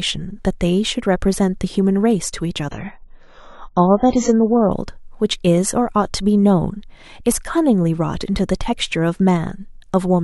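An adaptive stream dropping to a lower bitrate affects this speech clip from 2.71 s to 4.71 s. For those two seconds the player switched to a much leaner version of the stream, probably because the connection slowed. The treble vanishes above about 7.6 kHz and coding artefacts thicken, a change that fits a step from roughly 96 kbit/s AAC down to about 16 kbit/s. Quality shifts abruptly at both boundaries, with no gap in the sound.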